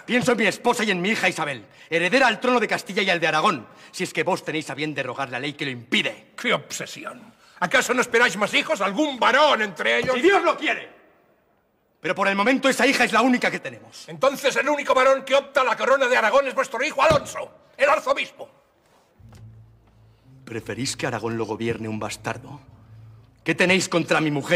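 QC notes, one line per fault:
No faults found on this pass.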